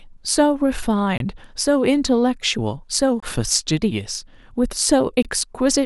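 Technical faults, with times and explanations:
1.18–1.20 s, 3.20–3.23 s and 5.23–5.25 s: gap between chunks. The speech stops dead three times, each hole about 23 ms long. The spacing is regular, about every 2 s, which points to audio handled in 2-second pieces. Silence was inserted at each join rather than any sound being dropped. So the speech resumes exactly where it paused, but with a short break.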